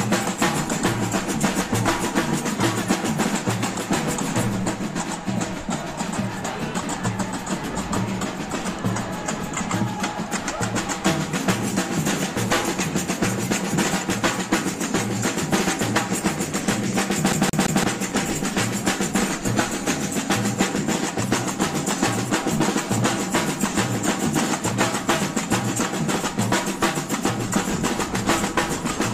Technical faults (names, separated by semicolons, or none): train of clicks; CD stuck on one turn